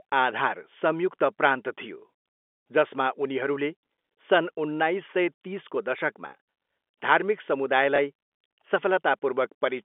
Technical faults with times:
7.96-7.98 packet loss with last packet repeated

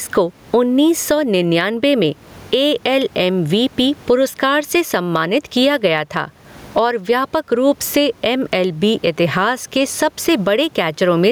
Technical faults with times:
0.00-11.32 gain pumping

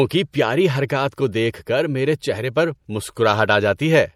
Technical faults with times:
0.00-4.15 MP3 compression
0.74-0.76 corrupt frame decoded

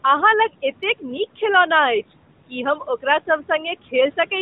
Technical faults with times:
0.00-4.42 noise suppressor artifacts

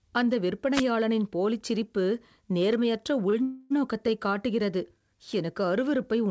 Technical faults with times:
0.73-0.83 wireless microphone noise hit
2.73 bit error spike
3.30-3.34 short stall from a late packet
3.42-3.72 call audio freeze

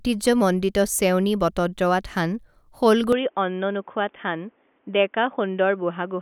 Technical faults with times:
3.12-6.22 input switched to a poorer device

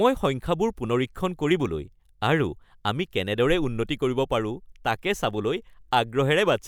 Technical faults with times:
none

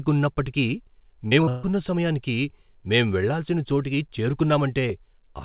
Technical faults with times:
1.28-1.49 short concealed packet loss
1.49-1.65 burst of packet loss

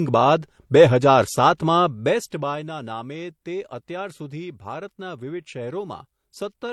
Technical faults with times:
0.00-6.72 transcoding between lossy codecs

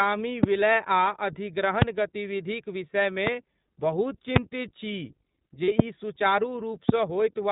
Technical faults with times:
0.00-7.51 iLBC codec
0.43-0.46 loud pop
1.82-1.84 loud pop
3.27-3.29 loud pop
4.36-4.39 loud pop
5.64-5.69 lost iLBC frames
5.79-5.82 loud pop
6.89-6.91 loud pop

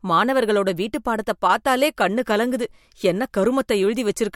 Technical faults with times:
none

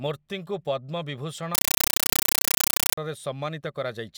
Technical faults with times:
1.55-2.97 compressed stream played as audio

